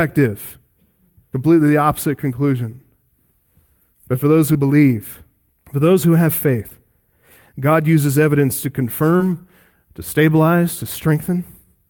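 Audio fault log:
4.53–4.57 s, 6.69–6.73 s and 9.17–9.22 s: short concealed packet loss. Gaps of 20, 20 and 40 ms after "for those", "for those who have" and "uses evidence to" were filled by extending the preceding sound, so each one is a brief smear. On a spectrogram, harmonics stretch flat or turn into blurred noise. The waveform shows repeated cycles before it rejoins the real signal.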